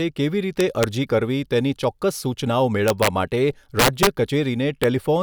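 Integer overflow breaks up this speech at 0.61–0.84 s, 2.88–3.07 s, 3.79–4.07 s and at 4.84 s: loud peaks overshoot the integer range by about 1 to 5 dB and wrap to the opposite sign instead of limiting, giving harsh cracks. The waveform shows peaks flipping rail to rail; the spectrogram shows broadband vertical streaks.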